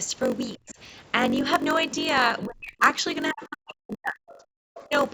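A speech recording with a steady 46.9 Hz buzz running through it: that's a block size mismatch (padded), zero-filled gaps in every block, which fits a 1024-sample read size, and the audio runs at 0.938 speed. The talker gets pushed down at 0.58–0.78 s, 2.46–2.83 s, 3.31–4.34 s and 4.88–4.94 s, dipping by up to about 40 dB, most likely speech suppressed in double talk as the echo canceller ducks both sides. Faint scraps of another voice, well below the talker, come through at 0.68–0.75 s, 3.68–3.73 s, 4.32–4.38 s and 4.76–4.88 s, likely the other side's voice leaking through from the loudspeaker.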